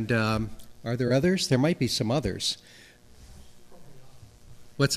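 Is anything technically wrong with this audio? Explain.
Yes. Three corrupt frames were concealed, at 1.07 to 1.11 s and at 4.43 to 4.48 s. The decoder detected damaged AAC data and masked it, by muting the frames or by filling them with a sign-scrambled copy of the last good spectrum.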